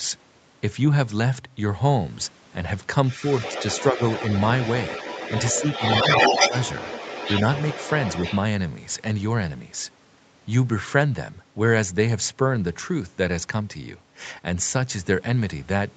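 From 3.08 to 8.38 s a second voice leaks through beneath the speech, only a little quieter, most likely the other side's voice leaking through past an incompletely cancelled loudspeaker echo. It is a separate talker, not a reverberant copy of the main voice. Within that stretch, at 3.92–3.99, 6.28–6.33 and 6.49–6.53 s, the speech itself dips briefly by about 5 dB. These short ducks match speech suppressed in double talk, likely the canceller turning everything down while both sides overlap, rather than packet dropouts.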